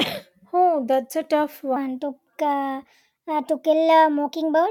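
Speech that, from 1.76 s to the end, suddenly turns hurried and higher, running 1.2 times too fast and rising about three semitones at once. It is a section at the wrong speed, likely from that stretch being played back against the wrong clock.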